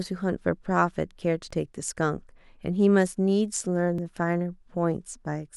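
A speech recording that was most likely handled in chunks of about 2.5 s, losing a sliver of audio each time one chunk closed and the next opened. The result is audio missing between chunks: at 1.51 s and again at 3.98 s the sound jumps forward by roughly 20 ms, the two sides butted together with no gap of silence. The skips fall about 2.5 s apart, matching the chunk length, and each shortens the speech passing through that instant.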